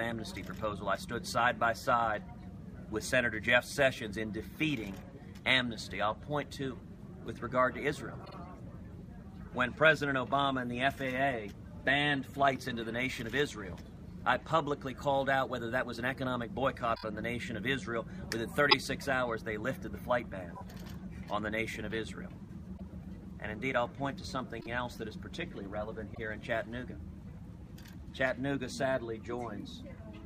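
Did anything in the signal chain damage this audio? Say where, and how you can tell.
Yes, repeated frames at the codec or storage stage: compressed blocks replay at 8.24, 16.94, 18.69, 20.55, 22.77, 24.60 and 26.14 s. Each is a short stutter, and the 26.1 ms step suggests MP3-size frames.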